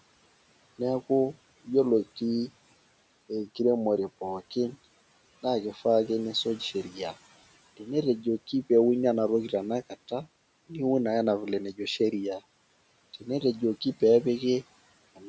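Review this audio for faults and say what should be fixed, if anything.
Right at the end, from 15.16 s to 15.29 s, there's speech cut by the noise suppressor. It took the fading tail of the last sound for background and pulled it down by about 12 dB for roughly a tenth of a second, so the ending sounds swallowed. Backing off the suppressor's strength or giving it a longer release would keep quiet speech endings from being turned down with the noise.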